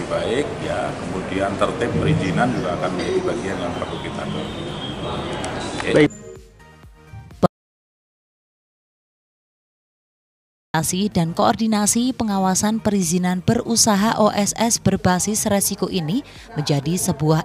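The audio cuts out abruptly at 7.46 s and returns mid-flow at 10.74 s, leaving about 3.3 s of dead silence with no room tone at all. This is an audio dropout to silence, likely from the input being lost while the recorder kept writing silence.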